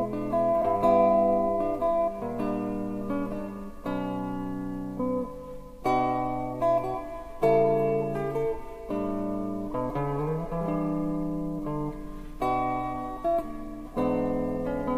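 At 0.61 s the audio lurches forward, and roughly a tenth of a second of material is simply gone. This is compressed frames skipped: a few whole frames, around four at 23.2 ms each, were missing or rejected as damaged by the decoder and never played.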